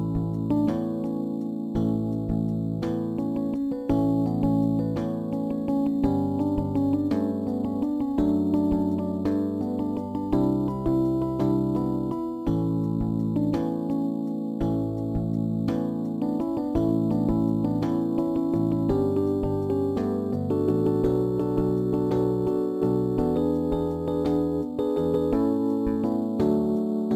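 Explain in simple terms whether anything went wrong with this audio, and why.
Imaging from sample-and-hold upsampling is present throughout the clip. It sounds like a thin metallic fizz above 12 kHz that rises and falls with the sound. The audio appears to have been converted up from 24 kHz by repeating samples without smoothing, leaving mirrored copies of the sound.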